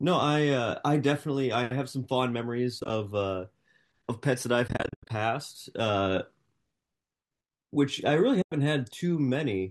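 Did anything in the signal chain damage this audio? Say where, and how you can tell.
Yes, AAC frame loss with muting at the network-to-codec stage: soft-edged holes at 2.80–2.90 s, 4.68–5.10 s (longest gap about 100 ms) and 8.42–8.52 s. Lost frames were zeroed, and overlapping windows fade each gap. The 10 ms gap steps likely point to low-delay AAC.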